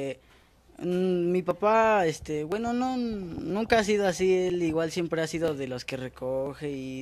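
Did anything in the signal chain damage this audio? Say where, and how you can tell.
Yes. Tiny skips at 0.51, 1.51, 2.52, 3.50, 4.50, 5.48 and 6.46 s, one per second, point to overlap between stream segments: overlapping 1.0 s segment timestamps trimmed away real audio, making the waveform jump.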